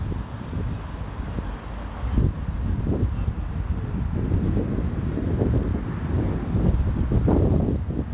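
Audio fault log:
No faults can be heard anywhere in this sound. It comes over a WebRTC call path with nothing above 4 kHz, a band limit that fits the G.711 mu-law codec.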